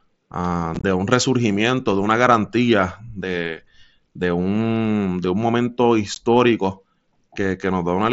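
Between 0.75 and 0.84 s the speech breaks into a cluster of tiny holes with hard edges, a rough chopped crackle in which the longest single gap is about 22.5 ms and the holes add up to about 52.5 ms. A lone abrupt-edged dropout follows at 6.15 s, about 15 ms long. Both are unconcealed Bluetooth headset packet loss: short voice packets on the mSBC wideband link never arrived, and the gaps were left unfilled rather than being concealed.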